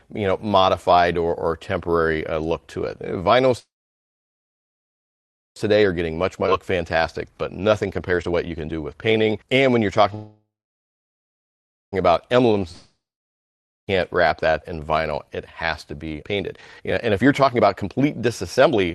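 Audio carried over a call link shows four fault types, with coding noise and a top end ending near 12 kHz that points to a low-rate super-wideband call codec. A call audio freeze occurs at 3.59–5.58 s and again at 10.15–11.94 s, likely from packets held up until the jitter buffer emptied. Each begins with a brief fading continuation of the last sound, then silence, and playback resumes where it stopped, adding about 2.0 s and 1.8 s of delay without losing audio. Jitter buffer speed-up follows as the receiver trims the backlog by cutting pitch-period-sized slices. It plays at 119% from 5.76 to 10.12 s, removing roughly a second, at 110% from 12.12 to 12.42 s, and at 134% from 16.13 s to the end, again removing roughly a second. The pitch stays the same while the pacing sounds hurried. Inside the first speed-up, a skip ahead at 6.47–6.50 s jumps over roughly a second of audio, with the two sides spliced almost directly. 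A long network dropout at 12.72–13.89 s, likely a stretch where no packets arrived, begins with a fading buzz or hiss and then about 0.87 s of silence. About 1.16 s of audio is lost for good.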